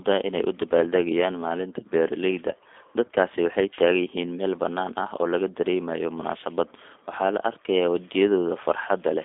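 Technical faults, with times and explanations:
Throughout: G.729 codec. The speech is rebuilt from a vocal tract model and sparse pulses, which fits an 8 kbit/s G.729A stream, so it sounds rough and synthetic. Unlike plain telephone band-limiting, which only narrows the sound to about 250 Hz–3.5 kHz with nothing above 3.6 kHz, this adds buzzy artefacts.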